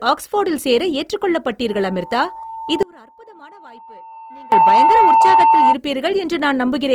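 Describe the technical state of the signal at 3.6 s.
At 3.6 s the speech sits inside an audio dropout to a faint residue, running from 2.83 to 4.52 s. The signal was lost for about 1.7 s, but the path after the break stayed live. The speech cuts off abruptly, and only a faint leak remains, roughly 25 dB below normal level. It is not a pause or a fade, and it is likely a break upstream in the chain.

A loudspeaker feedback squeal is also present, from 1.68 to 5.76 s. The microphone is picking up its own loudspeaker, and the loop gain has passed one at 898 Hz. That single tone swells over roughly three seconds. At 3.6 s it is still climbing, toward about 10 dB above the speech.

Opus compression affects the whole clip. The spectrum stays full, reaching about 20.2 kHz. Still, tones sound rough and grainy rather than swirling, which points to the music (CELT) mode. This is likely Opus at a low rate near 24 kbps, where band filling replaces true detail.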